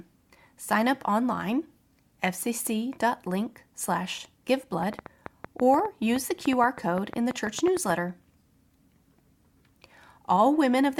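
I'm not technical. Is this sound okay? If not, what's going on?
No. From 4.83 to 7.91 seconds, a train of clicks runs over the speech. About twenty sharp ticks arrive, roughly seven per second, at an uneven pace and loud enough to stand out. This is likely interference from nearby equipment or a faulty connection or power supply.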